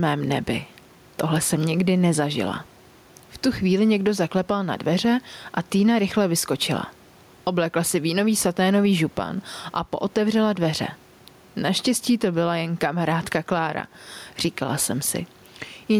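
The input gain is likely set far too high for the microphone, with a fast limiter or compressor dragging it back down on every loud syllable, and this gain pumping runs through the whole speech clip. The level swings by roughly ten decibels, with the room noise about 37 dB below the speech, while loud and soft passages sit squashed close together in level.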